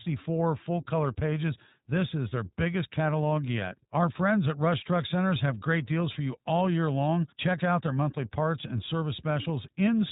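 iLBC codec coding runs throughout the speech, capping bandwidth at 4 kHz and adding a plainly rough, synthetic edge, consistent with 20 ms frames whose excitation is coded independently, at a rate that fits roughly 15 kbps narrowband VoIP.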